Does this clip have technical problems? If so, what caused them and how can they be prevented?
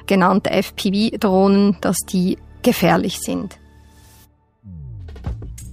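Yes. Zipper noise runs from 2.88 to 3.72 s. In that span the level drops by about 10 dB in steps of about 3 dB, at around four steps per second, instead of gliding down. Each jump is an unsmoothed gain change that leaves a small click, so a ticking rides on the sound while it fades. On a waveform the envelope falls as a staircase, and a spectrogram shows faint vertical broadband lines at each step. Ramping the gain smoothly per sample between target values prevents it.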